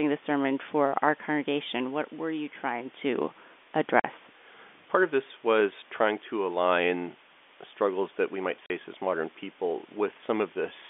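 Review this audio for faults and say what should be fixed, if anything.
A steady, even hiss runs under the speech from start to finish, sitting roughly 25 dB below the signal, with no grit or distortion riding on the louder passages. That is low bit depth with dither: the samples were rounded to very few levels, which sounds like about 8 bits, and the dither added first turns the rounding error into constant white noise. The narrow telephone band of G.711 coding does not mask it. Keeping the audio at 16 bits or more until the final encode prevents this.

The speech drops into dead silence twice, each gap 40 ms long with hard edges: at 4.00 to 4.04 s and again at 8.66 to 8.70 s. This is packet loss filled with silence. Packets went missing in transit and the receiver inserted zeros where they should have been. Each 40 ms hole fits two consecutive 20 ms packets. Using a jitter buffer with packet loss concealment, or forward error correction, prevents these holes.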